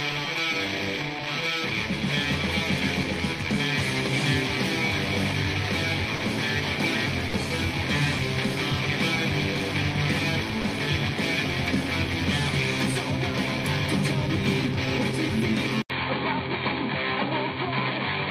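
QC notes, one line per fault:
6.15 to 6.21 s, 7.27 to 7.33 s and 10.61 s, sound dropped by the voice detector: the sender's voice activity detection likely judged these moments to be background and briefly stopped transmitting, the way discontinuous transmission in a codec like Opus does, so the receiver filled the gaps with comfort noise. The audio gives way for about 60 ms each at the first two points and about 20 ms at the third, then returns when the detector triggers again.
15.82 s to the end, input switched to a poorer device: the system likely changed its capture input partway through to a narrower-band microphone or headset profile. An 80 ms silence marks the switch, and afterwards nothing is present above 4.5 kHz, so the sound turns dull and boxy. The new device's background noise sits roughly 50 dB below the signal, and the overall level stays about the same across the change.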